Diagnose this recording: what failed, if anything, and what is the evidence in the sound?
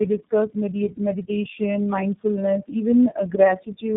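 The failure sits in the codec stage: the speech passed through three low-rate speech coders in a row, AMR-NB at 5.9 kbit/s, AMR-NB at 7.95 kbit/s and finally iLBC at 13.33 kbit/s, with G.711 links between them. That is tandem speech coding, where each coder re-encodes the losses of the one before. Across the whole clip the speech is rough, muffled and warbly, with nothing above 3.8 kHz.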